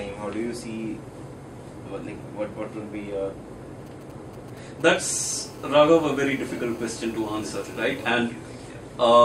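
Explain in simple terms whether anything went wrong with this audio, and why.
GSM signalling bursts appear from 3.86 to 5.06 s: a galloping dit-dit-dit of short buzzes. A nearby 2G mobile phone was sending brief groups of radio pulses, as phones do before a call or text arrives, and the audio equipment picked them up and turned them into sound.

GSM phone buzz follows from 5.14 to 8.11 s: a hard, raspy 217 Hz buzz. During a call, that phone transmits in pulses 217 times a second, and the recording circuit converted those radio pulses into this buzz, which has nothing to do with the recorded sound.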